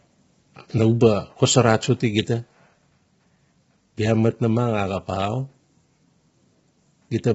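Speech, likely passed through low-delay AAC compression of the AAC-ELD kind used in video calls, at a rate fitting roughly 16 kbps. At this low bitrate the coding is coarse, so the voice sounds rough and grainy throughout, with noise between harmonics and nothing above 7.7 kHz.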